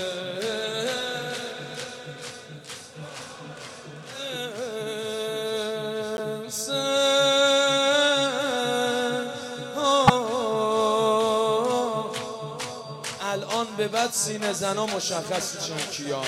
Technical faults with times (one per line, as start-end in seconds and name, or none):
6.16-6.19 corrupt frame decoded
10.07-10.10 corrupt frame decoded